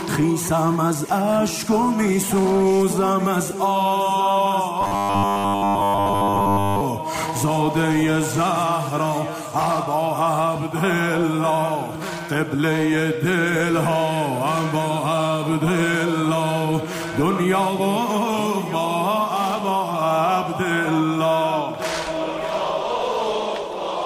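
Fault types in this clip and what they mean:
Robotic sound from repeated short buffers: from 4.81 to 6.81 s the sound collapses into a rigid metallic buzz at 100 Hz, likely because fresh audio arrived too seldom and essentially all of that stretch was filled by looping a 10 ms slice. A spectrogram shows evenly spaced horizontal harmonics at 100 Hz intervals replacing the normal texture, and the waveform shows a short shape repeating across those two seconds.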